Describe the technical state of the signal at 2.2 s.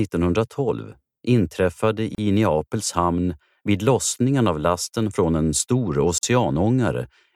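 Around 2.2 s the speech breaks on a gap at a join of encoded pieces, from 2.15 to 2.18 s, about 33 ms of silence. Two separately encoded segments were butted together without trimming, so the padding and start-up delay of each encoder run remain at the seam, and the pattern repeats every 4 s. The ear hears a brief dropout, after which the speech resumes exactly where it stopped. A waveform shows a flat near-zero stretch with slightly smeared edges, and a spectrogram shows a thin blank vertical band across all frequencies.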